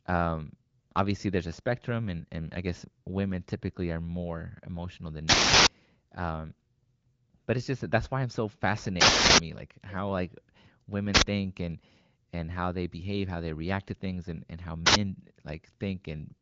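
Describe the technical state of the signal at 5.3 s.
An uninitialised buffer fault runs from 5.29 to 5.67 s. A block of about 0.37 s, which fits a 16384-sample buffer, was played before any audio had been written into it, so stale memory contents came out as a loud burst of digital noise.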